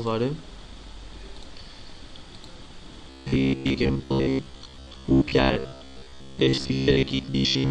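Audio starved for new data from 3.1 s to the end, most likely because fresh blocks reached the output too seldom, so short stretches of about 15 ms were looped to fill the gaps while most of the real audio in that span went missing. The result is robotic sound from repeated short buffers: a rigid, metallic buzz locked at about 66.7 Hz, with the original sound only loosely traceable beneath it.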